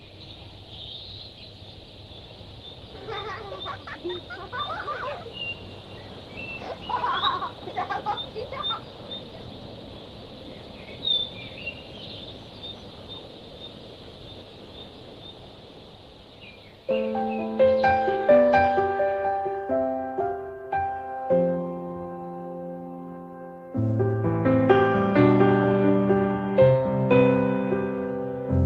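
Nothing in the signal points to a technical problem at any point in the recording.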